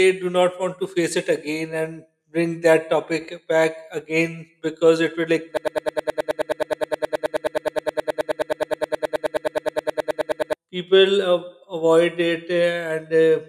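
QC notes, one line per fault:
5.57–10.54 s, broken-record loop: a 105 ms slice of the speech repeats back to back, nearly fifty times, for about five seconds, giving a rapid stutter. Likely a stalled player or stream resending its last buffer, so the speech from that stretch is gone.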